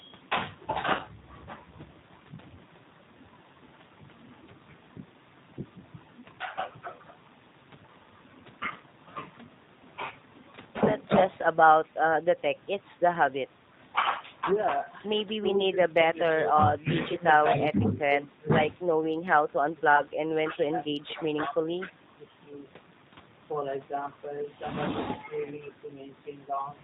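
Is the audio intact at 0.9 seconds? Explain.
No. The whole clip runs through the G.729 codec at 8 kbit/s, so nothing above 4 kHz survives and the speech has that plainly rough, slightly synthetic edge. Right after your point, from about 0.95 to 1.0 s, there's VoIP packet loss concealed by the speech codec. Roughly 40 ms went missing, which fits two packets, and the decoder stretched its last pitch and filter into a fading buzzy tone or coloured noise.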